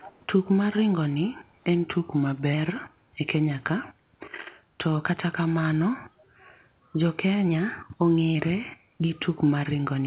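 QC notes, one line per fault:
0.01–0.19 s, echo leak: there's a faint delayed copy of the speech right at the start, trailing by about 422 ms and sitting well down, around 20 dB under the main voice. Most likely the far end's echo canceller let some loudspeaker pickup slip back through.
6.16–6.2 s, background gated by the echo canceller: the room tone ducks by about 6 dB for 40 ms, then comes straight back. That's the canceller clamping the mic while the loudspeaker was active and releasing once playback stopped.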